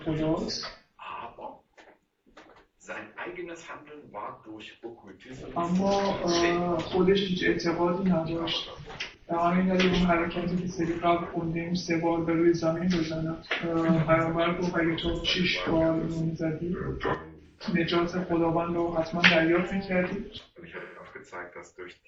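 AAC frame loss with concealment occurs at 0.44, 2.91, 7.18, 10.38, 12.77, 15.16, 17.46 and 20.79 s. Each dropout lasts 43 to 171 ms, which fits one to four lost frames. The decoder fills each gap from the last good spectrum, giving a short smeared, noisy or phasey patch.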